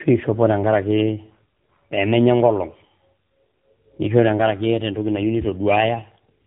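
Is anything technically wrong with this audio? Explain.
Yes. Throughout, there is tandem speech coding: the speech passed through two speech codecs in a row, each re-encoding the previous one's degraded output. The texture points to an AMR-NB stage at about 7.4 kbit/s following G.726. The speech sounds rough, muffled and warbly, with nothing above 3.8 kHz.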